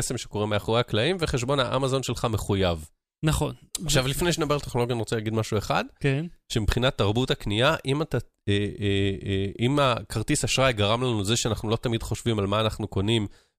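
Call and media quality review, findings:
Nothing to flag on this speech recording; listened through and there's no fault to log.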